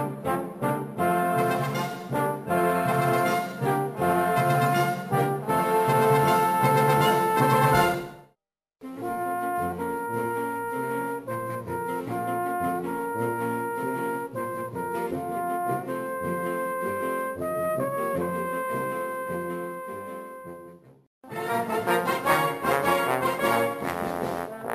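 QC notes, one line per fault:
Throughout, imaging from sample-and-hold upsampling: a bright, metallic fizz sits above the sound and rises and falls with its level. It fits a rate doubled from about 22 kHz to 44.1 kHz by repeating each sample without a smoothing filter. The held steps fold a mirrored copy of the spectrum into the 11.03 kHz to 22.05 kHz band, about 24 dB below the signal. That lowest copy moves opposite to the pitch, which makes it sound unnatural.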